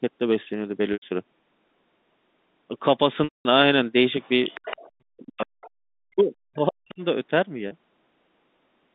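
At 3.24 s, packet loss with pitch repetition sets in until 3.45 s. About 210 ms of audio went missing, which fits a run of several lost packets. The receiver looped the last pitch period, so the sound holds as a buzzy, frozen tone that fades out. A plain dropout would give clean silence instead.

From 4.22 to 4.91 s, and again briefly from 5.61 to 5.70 s, the other side's voice is leaking through. A second, thinner voice sits at about 20 dB and then about 30 dB below the main speech. Its likely cause is loudspeaker echo that the canceller left in the microphone signal. What separates it from crosstalk is that the leaked voice is the far end of the same call.

Between 4.99 and 5.62 s, and again from 6.07 to 7.02 s, the speech is suppressed in double talk. The main voice dips and chops in pieces, falling by roughly 40 dB at its deepest, over about half a second and then about a second. This is likely the echo canceller turning down both sides while they overlap. 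Unlike packet loss, there is no held buzzy tone, only gated gaps that follow the overlap.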